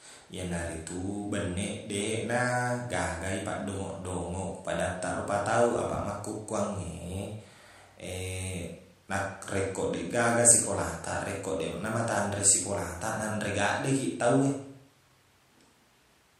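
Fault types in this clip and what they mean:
No faults detected.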